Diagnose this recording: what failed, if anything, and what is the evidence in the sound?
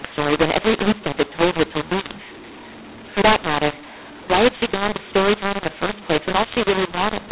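The codec stage failed: telephone speech encoded as A-law was decoded as mu-law, the mu-law and A-law mix-up. Each 8-bit code lands on the wrong logarithmic step throughout, so levels come out scrambled, the speech sounds harsh and distorted, and pauses fill with noise instead of silence, all within the normal 4 kHz telephone band.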